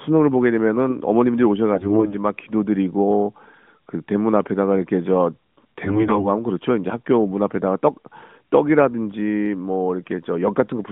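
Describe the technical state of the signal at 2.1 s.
At 2.1 s the speech is inside a burst of AMR bit errors running from 1.74 to 2.17 s. Roughly a fifth of the weakly protected bits arrive flipped, misplacing excitation pulses, so the voice keeps pitch and level but turns hoarse and gargly, unlike a dropout's silence.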